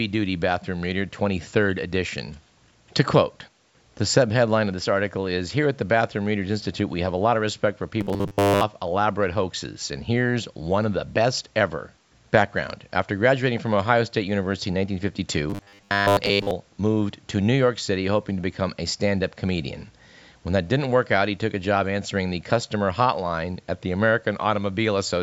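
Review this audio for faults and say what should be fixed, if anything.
Audio likely reached playback too seldom, so the software filled the gaps by looping a short buffer of about 10 ms while most of the real speech in those spans was skipped. This is robotic sound from repeated short buffers: a rigid, metallic 100 Hz buzz forced onto the speech from 8.01 to 8.63 s and again from 15.50 to 16.51 s. A larger jitter buffer and steadier audio delivery would prevent it.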